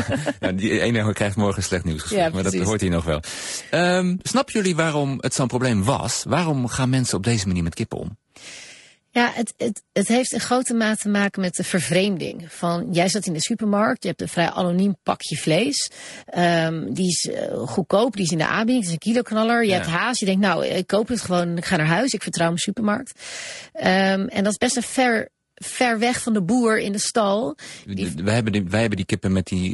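All the way through, the speech has a rough, grainy texture, with a hiss sitting between the harmonics and a thin, synthetic top end. That's plainly audible codec damage, most likely low-delay AAC compression, AAC-ELD at something like 32 kbps. Its short frames can't pin down the pitch harmonics well at that rate.

Around 12.27 to 12.33 s there's a brief smeared, noisy, phasey blip. That's AAC frame loss with concealment. About 40 ms went missing, which points to a couple of dropped frames, and the decoder papered over the gap by reusing the last good spectrum.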